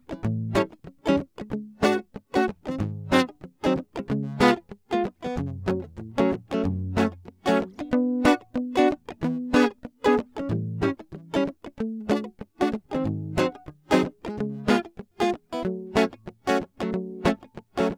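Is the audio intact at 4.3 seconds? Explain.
Yes, the music plays through 4.3 seconds without any dropout, glitch or distortion.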